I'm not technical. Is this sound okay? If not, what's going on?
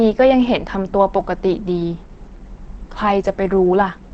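No. From start to finish the speech sounds muffled and hoarse, with nothing above about 8.5 kHz, so consonants lose their crispness. The likely cause is Opus compression in its speech mode, squeezing the audio so hard that it trims the treble and roughens the tone.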